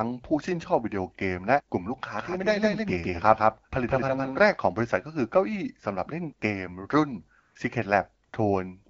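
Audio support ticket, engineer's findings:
Doubled audio track, 2.19 to 4.53 s: dry full-band echo about 150 ms late, about 5 dB down, starting and stopping abruptly. Likely a second, slower capture path mixed in.

AMR comfort noise, 7.39 to 7.55 s and 8.25 to 8.33 s: background swapped for smooth synthetic hiss for 160 ms and 80 ms. Phone-side silence detection stopped sending speech frames, and the receiver filled the gaps.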